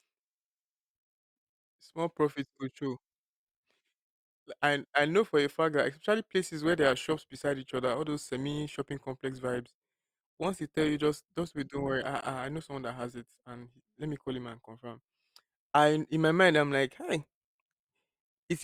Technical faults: adaptive stream at a lower bitrate

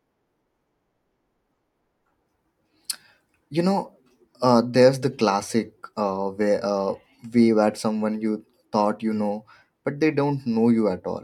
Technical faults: none

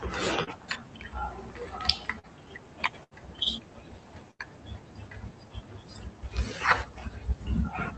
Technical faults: short concealed packet loss; burst of packet loss

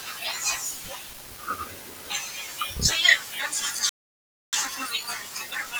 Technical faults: playback stall; time-compressed catch-up

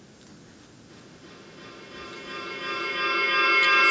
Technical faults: feedback echo between two devices

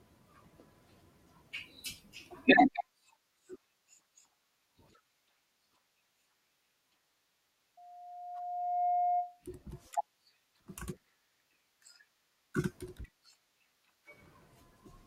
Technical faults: loudspeaker feedback squeal

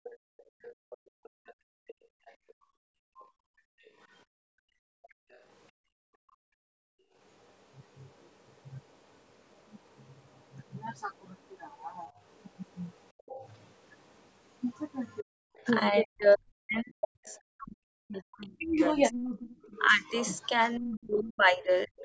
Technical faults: other side's voice leaking through; background gated by the echo canceller; speech suppressed in double talk

